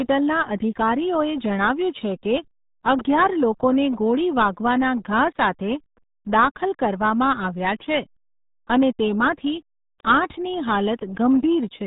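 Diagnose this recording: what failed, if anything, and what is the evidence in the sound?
Muffled, gargly speech throughout, cut off above 3.8 kHz: the codec stage, the RealAudio 14.4 codec, whose heavy damage fits an 8 kbit/s speech coder.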